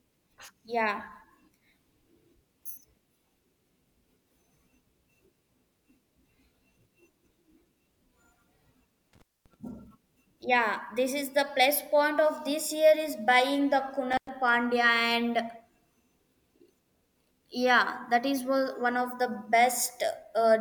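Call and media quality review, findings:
Intermittent contact, 9.13–9.54 s: speech cuts out for about 240 ms, crackle at both edges. Probable component: loose cable or plug briefly opening the analogue line. Intermittent contact, 14.12–14.29 s, just after "year is buying the": same symptom, about 100 ms open. Distinguishing cue: the edge crackle and faint hiss while the line is open mark a physical break. A network dropout gives clean silence or concealment artefacts instead.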